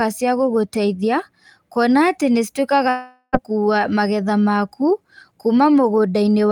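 Speech, and at 2.89 s it drops out for roughly half a second, until about 3.35 s. That's what a long network dropout sounds like. The last bit of sound gets stretched into a fading buzzy tail for around 430 ms, then there's a short stretch of near-silence before the audio picks up again further along. Roughly 440 ms of the original is just gone. Likely cause is packets not arriving and the receiver's concealment papering over the gap.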